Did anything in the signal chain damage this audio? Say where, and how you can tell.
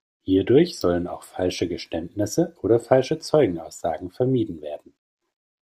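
No, there's no damage from the signal chain here.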